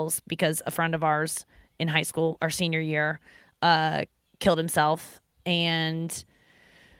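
Nothing to flag: no audible technical faults anywhere in this speech recording.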